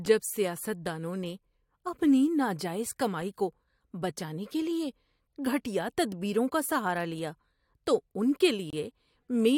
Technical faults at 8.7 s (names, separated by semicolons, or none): gap between stream segments